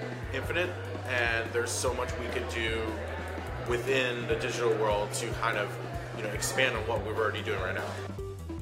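No technical faults are audible.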